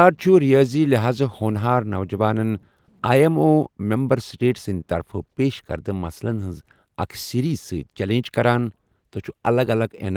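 At 1.98 s a single sharp click cuts through the speech, showing as a thin vertical line across the spectrum. This is likely dropped samples: a couple of samples go missing, so the waveform jumps abruptly to a later value, far too brief to remove any audible sound.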